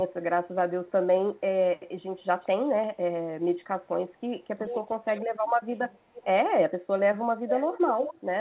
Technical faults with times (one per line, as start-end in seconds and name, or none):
1.29-1.36 echo leak
2.18-2.69 echo leak
4.17-4.82 echo leak
4.57-5.48 speech suppressed in double talk
5.14-5.18 echo leak
5.92-6.25 echo leak
7.48-8.21 echo leak